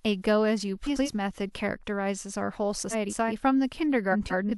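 At 0.86–1.09 s, 2.91–3.32 s and 4.12–4.51 s the speech has frames out of order. Two neighbouring blocks, 93 ms each in the first case and 186 ms in the others, play swapped, giving a garbled flutter. Unlike a dropout, no time is lost.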